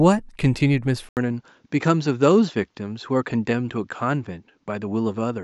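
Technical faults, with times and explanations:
1.09 s to the end: input switched to a poorer device. From 1.09 s the speech loses its top end, with nothing above 7.6 kHz, so it turns duller and boxier. An 80 ms silence marks the changeover. The level then sits roughly 5 dB lower, and a faint new background noise appears well below the speech. This combination of a gap, narrower band, different level and different noise floor most likely comes from the recording input changing to a lesser microphone or headset path.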